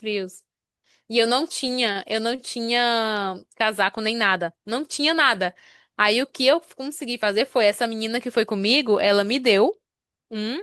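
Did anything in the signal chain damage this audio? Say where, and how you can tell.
Yes. The damage happens at the network stage, in the receiver's jitter buffer. There are two short stalls from a late packet, at 1.92 to 1.98 s and 2.35 to 2.41 s. Each time, a sound is held too long with a slight buzz or dip. The buffer ran dry while a packet was still in transit. The receiver stretched the last sound by about 30 ms, then resumed where it stopped. No speech is lost, but playback falls roughly 30 ms further behind after each stall.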